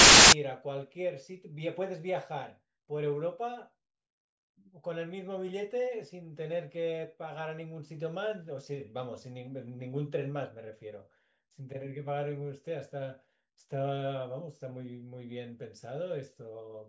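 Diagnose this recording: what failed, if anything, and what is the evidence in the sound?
The player read the file tags as audio, decoding an embedded cover picture as samples, so a hard-edged burst of very loud white noise opens the speech, from 0.00 to 0.33 s.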